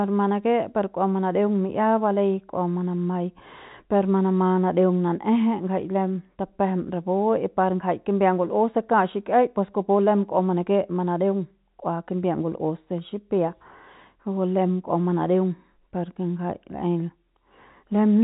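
Nothing stood out on listening to this speech, which carries the narrow band of G.711 telephone coding with no content above about 3.8 kHz.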